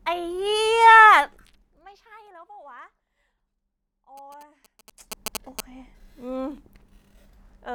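From 4.17 to 5.61 s, GSM signalling bursts from a nearby 2G phone are rectified by the audio circuit into a galloping dit-dit-dit of short 217 Hz buzzes, about 10 dB under the speech. A spectrogram shows evenly spaced harmonic stripes; the waveform shows clustered spiky pulses.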